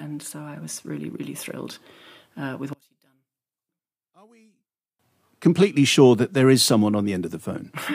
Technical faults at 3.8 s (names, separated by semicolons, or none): one channel inverted